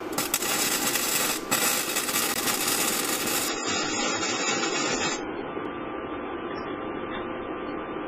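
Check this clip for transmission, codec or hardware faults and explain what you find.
Two faults turn up: two brief dropouts to silence and a lasting drop in stream quality.

A block of digital silence occurs at 2.34 s and again at 5.65 s. Samples were zeroed, likely because the output buffer wasn't filled in time. The first gap lasts about 17 ms and sounds like a short hole. The second, about 3 ms, is a tick.

From 3.48 s to the end, the adaptive stream switches to a lower bitrate. The sound changes abruptly, with no gap. Nothing remains above 7.7 kHz, so the treble is dull, and codec artefacts rise. This points to a step from roughly 128 to 16 kbit/s MP3.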